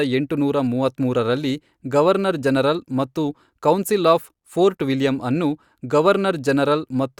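From 0.75 s to 1.56 s the speech carries a block size mismatch, truncated type. One stage hands over longer blocks than the next stage takes in, so the tail of every block is discarded. Each cut leaves a discontinuity, and these repeat as a buzz at 46.9 Hz, which fits a 1024-sample block. Pace and pitch stay at their normal rate. The fault clears just before "ಗವರ್ನರ್ ಜನರಲ್ ಮತ್ತು ಕೌನ್ಸಿಲ್".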